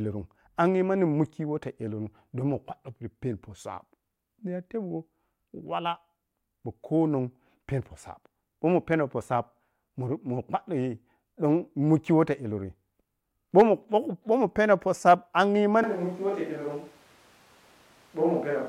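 At 15.83 s, right after "poh sab angyi", the speech suddenly turns roomy and hollow, thinner in the bass, roughly 5 dB quieter, with background noise rising to around 30 dB below the voice, through to the end. The likely cause is a switch to a distant microphone.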